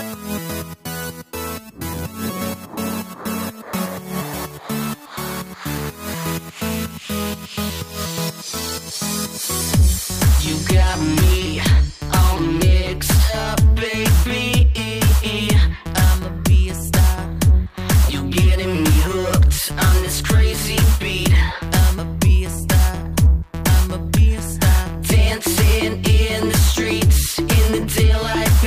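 Two devices likely running on separate clocks, around 100 ppm apart, let the buffer between them drift until a few samples are dropped or repeated. These clock drift buffer slips recur every 1.79 s from 0.85 s to 27.75 s, giving about fifteen regular clicks.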